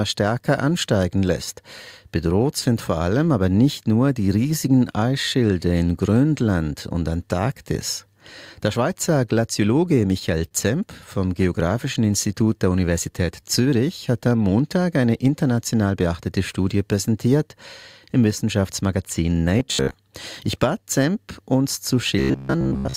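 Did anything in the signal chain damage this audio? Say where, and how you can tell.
Yes. Between 9.85 and 10.53 s there are repeated stalls (stutter) from the network side. The jitter buffer ran dry four times, and the receiver held the last sound for 57 ms in total, 29 ms at most. Nothing's lost, but it drags and hiccups.

From 11.58 to 13.63 s you get a jitter buffer slow-down. Playback runs at 94% speed with the pitch unchanged. The receiver repeated pitch periods to pad in 126 ms and rebuild its reserve, so sounds feel stretched and slightly drawn out.

Then 15.75 to 16.77 s is the opposite, a jitter buffer speed-up. The buffer was overfull, so short pitch-period chunks were trimmed, roughly a tenth of a second in total. That pushes things to 111% speed at the same pitch, and it sounds rushed.

At 19.59 to 19.94 s and again at 22.19 to 22.96 s there's robotic sound from repeated short buffers, a rigid metallic buzz at 66.8 Hz. 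That's likely a driver or buffer stage looping a roughly 15 ms block, with most of that stretch being repeats instead of fresh audio.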